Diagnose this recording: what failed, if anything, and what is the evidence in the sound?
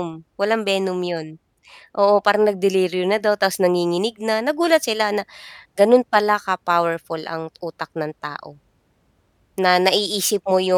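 Nothing failed in this recording, and the sound gives no evidence of a fault at any stage.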